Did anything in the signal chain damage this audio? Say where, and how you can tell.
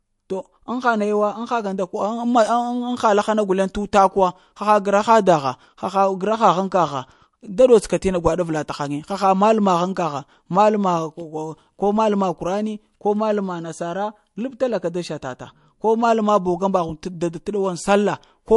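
Yes, at the codec stage, and it runs through the whole speech clip. There's nothing at all above 11.3 kHz, a hard shelf where the encoder gave up on the treble, and the sibilants come out swirly and metallic, with a watery wash behind them. That's likely MP3 compression starved of bits: weak frequency lines get zeroed and flicker between frames, and the damage is plainly audible, consistent with a bitrate somewhere around 50 kbps.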